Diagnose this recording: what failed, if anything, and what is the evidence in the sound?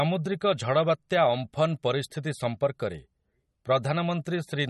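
Codec stage: a watery, swirling texture runs through the whole speech clip, likely MP3 compression at a starved bitrate near 34 kbps. Weak frequency lines flicker between frames, which a plain low-pass filter wouldn't do.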